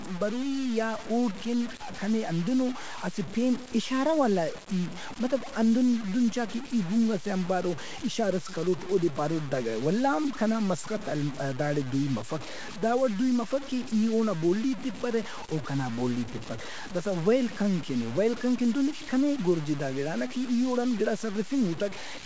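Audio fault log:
Throughout, low bit depth without dither: the speech has a coarse, grainy distortion that rises and falls with the signal, sitting roughly 15 dB below it, and quiet passages break into gritty sputter or drop out between steps. The likely cause is truncation to very few amplitude levels with no dither, which fits about 5 bits, so the rounding error tracks the waveform instead of forming a steady hiss. The band stops at 8 kHz from the call path.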